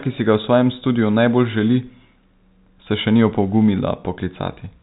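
No technical faults are audible.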